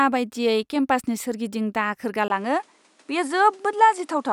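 At 2.28 s the speech drops out for about 20 ms, then continues to the end with nothing above 11.4 kHz, a slightly duller tone and a faint new noise floor well below the signal, at unchanged level. The likely cause is the input switched to a poorer device.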